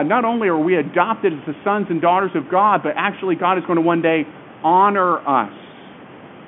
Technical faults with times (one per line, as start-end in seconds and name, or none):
none